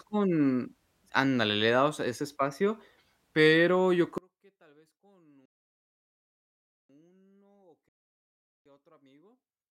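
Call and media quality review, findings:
From 4.18 s, after "ese espacio pero yo", to the end: the speech drops about 34 dB and turns faint. Likely one channel inverted, so the centred voice cancels when summed to mono.

Rebuffering stall at 5.46 to 6.89 s and 7.89 to 8.66 s. Silence, then the speech resumes where it stopped. The player ran dry. Adds 1.44 s and 0.77 s.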